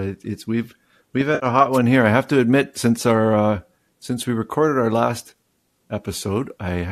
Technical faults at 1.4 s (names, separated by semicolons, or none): AAC frame loss with concealment